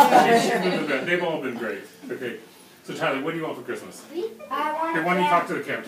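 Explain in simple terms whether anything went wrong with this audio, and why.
Nothing went wrong with the sound in this recording. There are no breaks, jumps or sudden changes anywhere in it, so there is nothing here to explain or fix.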